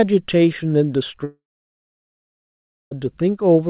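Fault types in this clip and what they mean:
Long network dropout: from 1.24 to 2.93 s the audio stops. The last sound is stretched into a brief fading buzz and then about 1.5 s of near silence. That is likely a stream that stopped arriving. The sound resumes at 2.93 s with the gap's content simply lost, heard through a narrowband call path cut off above 4 kHz.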